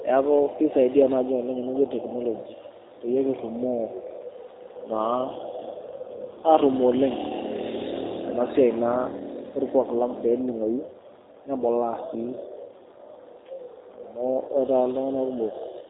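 From start to finish, the speech carries G.729 codec damage, and it is plainly audible. The codec rebuilds each 10 ms frame from a vocal tract filter, a pitch predictor and a few pulses. It does not send the real waveform. The result sounds rough and slightly synthetic, and that fits an 8 kbit/s G.729A stream. Nothing above 3.8 kHz survives, so consonants lose their crispness and the sound feels narrow.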